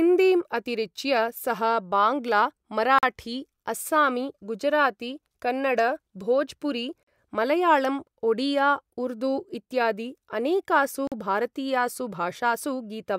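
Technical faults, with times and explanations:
2.99 s, 7.03 s and 11.07 s: gap between chunks. The speech stops for 44 ms each time, after "अस्सामी गुजराती कन्नड भोजपुरी" and after "उर्दू इत्यादि अनेकासु". The holes recur every 4 s. The audio was joined from 4-second chunks with silence left at each join. No sound is lost.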